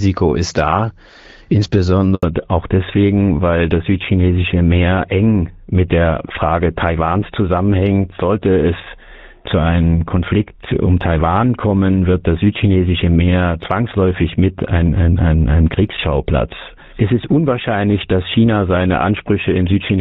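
Right around 2.15 s there's a handover gap: the call gets passed from one network to another, and for about 80 ms, until 2.23 s, no speech frames come through at all. You hear the sound drop out quickly and sit in dead silence until the new link picks up. Whatever was said in that stretch is simply gone, not muffled or smeared.

From 2.23 s to the end you get a fallback to narrowband. Before the switch the audio has that wider HD Voice character, consistent with AMR-WB running at around 12.65 kbit/s with only light coding damage. After the gap everything above 4 kHz is cut off, which points to the call landing on the old GSM full-rate codec at 13 kbit/s. The speech sounds duller and rougher for the rest of the clip.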